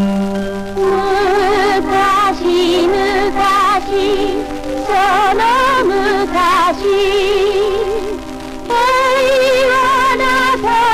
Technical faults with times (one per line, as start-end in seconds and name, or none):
0.00-10.94 hard clipping